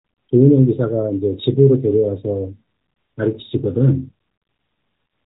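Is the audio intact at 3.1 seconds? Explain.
No, at 3.1 seconds the speech is still going through the AMR narrowband mobile codec, which affects the whole clip. It cuts everything above 4 kHz and rebuilds the voice from a vocal-tract model, which leaves a clearly buzzy, synthetic edge at around 10.2 kbps.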